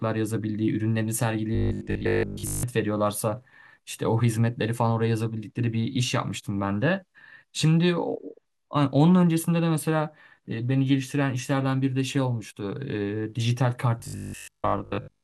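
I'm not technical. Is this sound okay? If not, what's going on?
No. Robotic sound from repeated short buffers appears from 1.55 to 2.63 s and from 14.0 to 15.24 s. The speech becomes a rigid metallic buzz at 50 Hz. Most of the sound there is likely being replaced by repeats of a tiny 20 ms slice.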